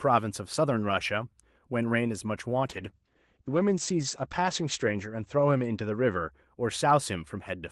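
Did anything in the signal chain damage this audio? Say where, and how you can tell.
Yes. From 2.66 to 6.51 s the speech turns muffled and rough, losing its top end: a call bitrate drop. The network estimate fell, and Opus coded more coarsely, narrowing from 12 kHz to 8 kHz bandwidth, consistent with roughly 40 falling to 11 kbps.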